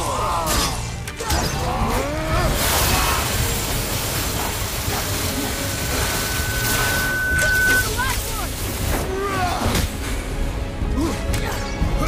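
A single tone near 1.5 kHz swells over about two seconds into a squeal a few decibels above the rest of the audio, from 5.26 to 7.88 s. This is loudspeaker feedback squeal, where the microphone re-amplifies its own loudspeaker output at that frequency.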